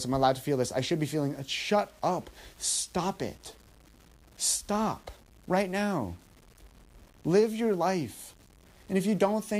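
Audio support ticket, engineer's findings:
Low bit depth without dither, whole clip. Grainy distortion tracking the speech, gritty on quiet syllables, error roughly 30 dB below signal. Likely truncation to 8 bits without dither, so the rounding error follows the waveform instead of becoming steady hiss.

Filter restarted on every block, 3.04 to 4.28 s. Buzz at 25 Hz, rising and falling with speech level. Filter state reset at each block boundary, a small start-up transient every 40 ms, which fits a per-block processing stage losing its memory.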